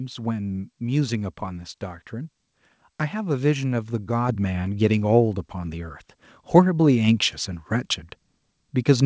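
At 4.29 s the speech and the background jump up together by about 6 dB in a single step: the microphone volume was stepped up because the call software judged the input too quiet.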